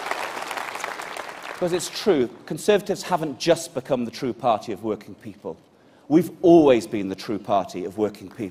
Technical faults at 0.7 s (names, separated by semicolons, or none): none